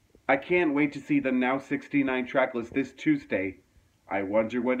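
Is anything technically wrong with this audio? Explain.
No, nothing in the signal points to a technical fault; there are no breaks or disturbances anywhere in the audio.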